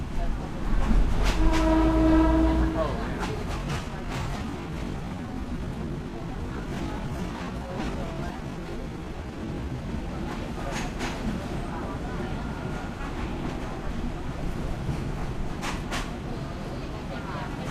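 From 3.54 s to 10.08 s the audio turns into a time-stretched section, running at about 0.65 times normal pace while the pitch stays put. It drags, likely from software lengthening the passage by repeating short pieces to fill time.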